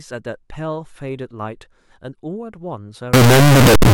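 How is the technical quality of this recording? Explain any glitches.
The recording has one serious glitch, in its final stretch.

From 3.14 s to 3.93 s the speech turns into a very loud, harsh roar, and quiet moments become as loud as everything else. The likely cause is signed and unsigned mixed up: the samples, which appear to be 16-bit, were read with the wrong sign convention. That flips the top bit, so every zero crossing jumps across the entire range.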